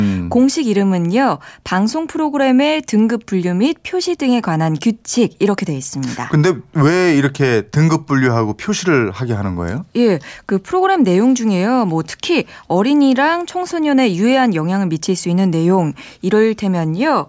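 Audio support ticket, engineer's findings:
No faults found in this speech clip. Nothing audible to attribute to any component in the chain.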